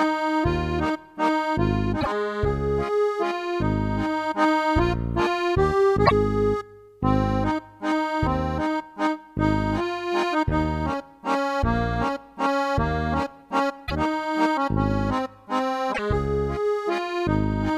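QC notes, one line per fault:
2.00–2.07 s, 6.05–6.12 s, 13.86–13.92 s, 15.92–15.99 s: broken MP3 bit reservoir. Each is a garbled glitch of 56 to 70 ms, two to three 26.1 ms frames. The sound then resumes further along rather than where it stopped. Frames were likely dropped, so the next frames fetched borrowed data from the wrong bytes and decoded into a mangled burst. The forward jump and garbled fill set it apart from a clean dropout or clipping.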